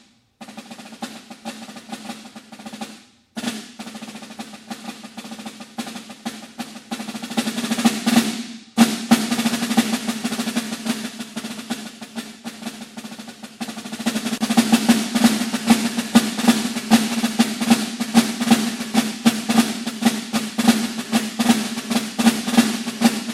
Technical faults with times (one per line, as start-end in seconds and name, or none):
14.38-14.41 gap at a join of encoded pieces